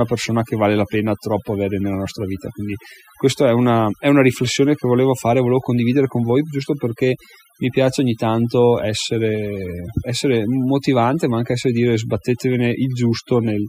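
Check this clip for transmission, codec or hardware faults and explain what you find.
One fault runs through the whole clip, and it comes from processing rather than transmission or hardware: overdone noise removal on the speech. A noise reducer set far too aggressively pulls individual frequency bands down or out whenever they sit close to its noise estimate, so the softer parts of the speech are cut along with the noise. The gaps fall to near silence dotted with twinkling specks. On a spectrogram the background turns dark with scattered isolated bright dots, and the weaker harmonics look patchy and broken.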